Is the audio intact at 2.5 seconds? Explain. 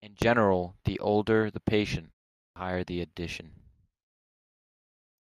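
No. After "the older the patient" and a 0.42 s pause, the sound bursts in abruptly at 2.47 s with its first 91 ms swallowed, through 2.56 s, just before "higher the". This clipped start after a pause happens because the output device went to sleep during the silence and woke too late.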